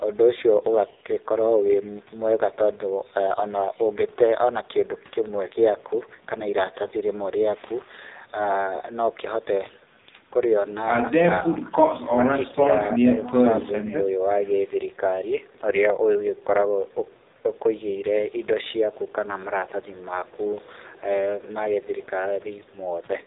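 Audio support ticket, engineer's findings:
AMR narrowband mobile codec, whole clip: nothing above 3.8 kHz, heavy buzzy, synthetic timbre from a vocal-tract model with sparse pulse excitation. The damage fits a low AMR-NB mode around 5.9 kbps. Distinct from a plain telephone band-limit: it adds a coarse frame-rate roughness, not just missing highs.

Speech suppressed in double talk: level dips at 12.04–12.24 s (about 20 dB), 12.52–12.73 s (a shallow dip, about 5 dB), 13.63–14.07 s (about 20 dB). Likely echo canceller clamping the near talker during overlap. Unlike packet loss, these are short gain ducks with the sound continuing underneath, not gaps or repeats.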